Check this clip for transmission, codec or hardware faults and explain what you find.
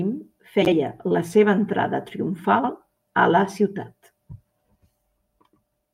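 Two faults turn up in this speech clip, both the same kind. Frames out of order at 0.62 to 0.73 s, just before "la seva entrada", and at 2.59 to 2.69 s, before "a la ciutat": two adjacent runs of about 48 ms each, which fits two-frame blocks, were decoded in swapped order. Each stretch plays with its halves exchanged, giving a brief garbled flutter, and no time is lost.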